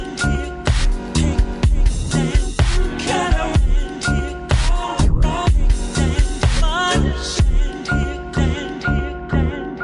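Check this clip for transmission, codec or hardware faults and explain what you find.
One fault runs through the whole clip: a wrong sample rate, present from start to finish. The samples are being clocked out more slowly than they were captured, with no resampling. Everything runs at about two thirds of its proper speed and drops by 7.02 semitones, which fits audio recorded at 48 kHz and played back at 32 kHz. The result is sound that is uniformly low, dragged and slowed, with all timing stretched by the same ratio.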